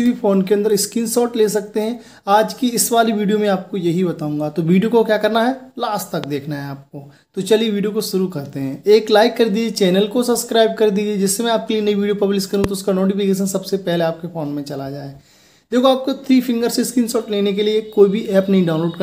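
Two loud pops sit on top of the audio, one from 6.24 to 6.26 s and a stronger one from 12.64 to 12.66 s. They peak about 10 dB and about 15 dB above the surrounding signal, and each is a single short, sharp hit while the sound continues unbroken underneath. The likely cause is a sudden voltage step or pulse, from a plug, switch, static discharge or driver glitch, being added to the signal path.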